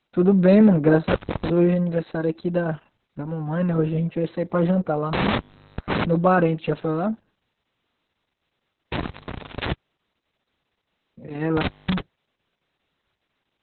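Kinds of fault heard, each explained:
Opus voice compression: Low-rate SILK coding leaves nothing above about 4.3 kHz, making the speech muffled, hoarse and slightly robotic throughout, consistent with roughly 6 kbps.
Intermittent contact: A connection opens briefly three times, cutting the sound with crackle at the edges for about 0.39 s, 0.52 s and 0.21 s, leaving faint hiss.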